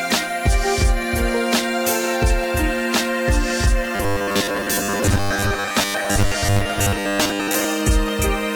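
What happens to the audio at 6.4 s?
At 6.4 s the music is inside a stretch of robotic sound from repeated short buffers, running from 3.96 to 7.65 s. The likely cause is audio arriving too seldom, so a 10 ms slice is replayed for most of the time and imposes a rigid 100 Hz metallic buzz. A spectrogram shows evenly spaced harmonics at multiples of 100 Hz, and the waveform shows identical cycles repeating every 10 ms.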